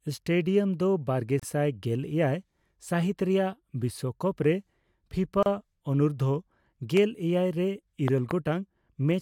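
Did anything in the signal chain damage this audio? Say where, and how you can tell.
Yes. At the codec stage, there is a gap at a join of encoded pieces at 1.40 to 1.43 s (33 ms) and again at 5.43 to 5.46 s (32 ms), exactly 4.0 s apart. Separately encoded chunks were butted together with their start delay and end padding left in. The waveform shows a short silent notch with smeared edges, and the spectrogram shows a thin vertical blank band.

A loud pop lands at 6.97 s, just before "ᱮᱭᱟᱭ ᱨᱮ", and a double pop follows between 8.08 and 8.33 s, right after "ᱮᱭᱟᱭ ᱨᱮ". Each peaks about 15 dB above the speech, which continues underneath. These are likely voltage transients in the analogue wiring, such as a connector, switch or static discharge. They appear as tall isolated spikes on the waveform and broadband vertical stripes on the spectrogram.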